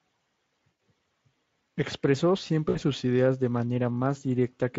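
At 0.71 s and again at 2.69 s, just before "sus ideas de", VoIP packet loss concealed by the speech codec lasts about 80 ms and 60 ms, roughly four and three 20 ms frames. The Speex decoder, running at a setting light enough to leave little codec damage, repeats its last pitch and filter at falling gain. Each gap becomes a brief, fading smear of buzz or coloured noise. A spectrogram shows the last sound held flat across the gap and the waveform a stretch tapering in level.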